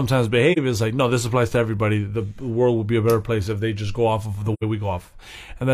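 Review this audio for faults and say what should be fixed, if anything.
AAC frame loss with muting occurs at 0.52 to 0.58 s and again at 4.53 to 4.64 s. The speech dips for about 43 ms, then drops out for about 85 ms, which points to one and then two lost frames. The decoder fills each missing frame with zero spectrum, so the overlapping transform windows fade the sound out and back in. That leaves soft-edged gaps. Protecting the stream with forward error correction or retransmission, or adding concealment that repeats or interpolates the previous spectrum, would prevent these holes.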